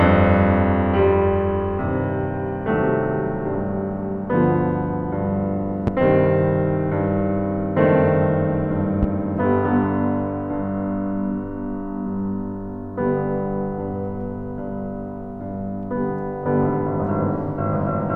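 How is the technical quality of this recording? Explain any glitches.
Two loud pops mar the recording, at 5.87–5.90 s and 9.03–9.06 s. Each was likely a sudden voltage step, from a plug, switch or static, shaped by the downstream circuitry. Each is heard as a single sharp pop, roughly 15 dB above the music, which continues underneath.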